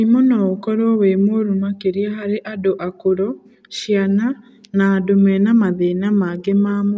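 No technical faults can be heard anywhere in the speech.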